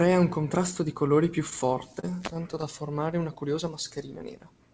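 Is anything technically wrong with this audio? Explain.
Yes. From 1.50 to 2.64 s, right after "contrasto di colori più", the speech shows repeated stalls (stutter). Packets arrived late or slower than playback, so the jitter buffer drained twelve times, and the receiver stretched the preceding sound to bridge each wait, 145 ms in total, about 13% of that stretch, the longest only 31 ms. Unlike packet loss, nothing is cut out: the speech drags and catches rather than skipping. The audio has no content above 8 kHz, which fits a wideband call codec such as G.722.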